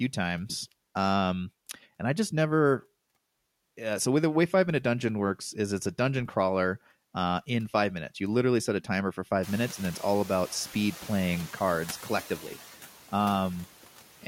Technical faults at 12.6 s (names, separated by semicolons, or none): noise suppressor artifacts